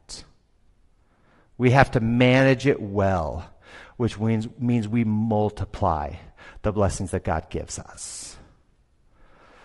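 From start to finish the speech sounds rough and grainy, with noise filling the gaps between harmonics and a thin, somewhat synthetic top end. This is likely low-delay AAC compression (AAC-ELD): its very short frames resolve pitch poorly and, at a rate that fits around 32 kbps, damage is plainly audible.

From 7.95 to 7.99 s there is a brief smeared, noisy patch. This is AAC frame loss with concealment: the gap points to a single lost frame of about 20 ms, which the decoder filled by extending the last good spectrum, leaving a blurred spot.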